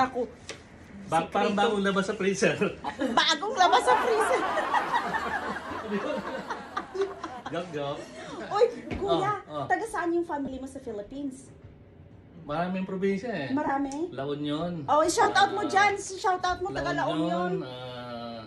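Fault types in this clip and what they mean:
Lost LE Audio frames: Bluetooth LE Audio frames went missing, and the LC3 decoder filled each gap by reusing the last spectrum with random signs. Brief noisy smears appear at 4.62, 10.45, 13.67 and 15.22 s. Each lasts 22.5 to 37.5 ms.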